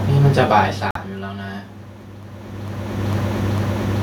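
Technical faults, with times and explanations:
0.91–0.97 s, Bluetooth dropout: the speech cuts to silence for about 66 ms and then resumes further along, as though it had kept playing during the gap. This is likely caused by audio packets missing their delivery deadline to the headphones, with roughly 46 ms of sound lost, which fits two dropped frames. On a waveform it appears as a flat gap. On a spectrogram it is a clean vertical blank band across all frequencies.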